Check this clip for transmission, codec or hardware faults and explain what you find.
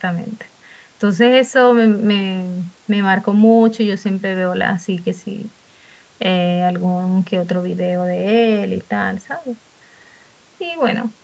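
No faults can be heard in this speech recording.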